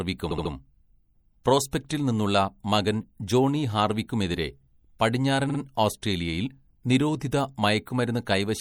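Right from the start the speech has a watery, swirly quality with dull treble, plainly audible and consistent with MP3 compression at a low bitrate, likely around 64 kbps, where the encoder drops weak high-frequency detail and it flickers from frame to frame.

Then come two stutters from repeated frames. At 0.30 to 0.52 s a 72 ms chunk plays three extra times, adding 216 ms. At 5.49 to 5.58 s a 48 ms chunk repeats twice more, adding 96 ms. Each time the same slice of compressed audio got played again.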